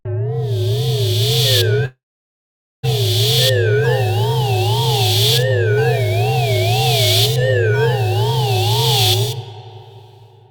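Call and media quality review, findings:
Long network dropout, 1.85 to 2.85 s. The final sound is carried on as a fading buzz, then about 0.84 s of near silence. Audio resumes with roughly a second missing, likely lost packets.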